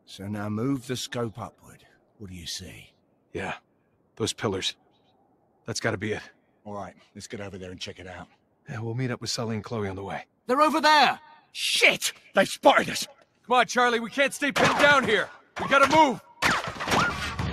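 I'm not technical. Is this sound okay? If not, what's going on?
No. Sound cut by the noise suppressor happens seven times: at 1.51 to 2.21 s, 2.88 to 4.19 s, 4.74 to 5.67 s, 6.32 to 7.16 s, 8.26 to 8.68 s, 13.14 to 13.48 s and 15.41 to 15.56 s. Each time, the tool meant to remove background hiss mistakes part of the real sound for noise and turns it down. Steady or fading parts get quieter or end abruptly, while sharp, sudden sounds still come through.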